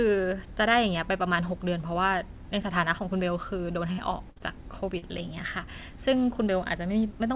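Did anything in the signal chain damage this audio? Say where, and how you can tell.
Yes. The damage happened on the network, in a burst of packet loss at 3.92 to 4.00 s and again at 4.30 to 4.38 s, each gap about 60 ms long. The receiver bridged each gap by extending the last sound and letting it fade, so you hear a brief held sound before the speech jumps forward with a piece missing. On a spectrogram, the last spectrum runs flat and dims out, then the pattern resumes abruptly.

There are also two instances of short concealed packet loss, both at the network and jitter-buffer stage. The first, about 20 ms, follows straight after the second burst at 4.38 to 4.42 s. The second, about 40 ms, runs from 4.98 to 5.04 s. Each was patched by continuing the last sound and blended back in, so it comes across as a quick smear or wobble. In the waveform, the continued sound stands in briefly before the real signal returns. 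Throughout the clip, nothing reaches above 4 kHz, which fits a 64 kbps G.711 mu-law call path.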